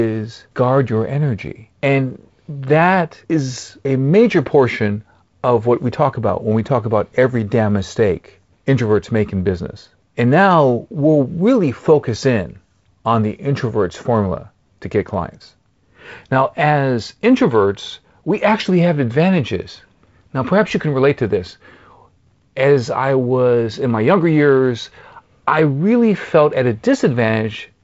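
The speech passes through G.722 wideband telephone coding working as designed, with nothing above 7.7 kHz and a slightly coarser lower band that fits its 48 kbit/s mode.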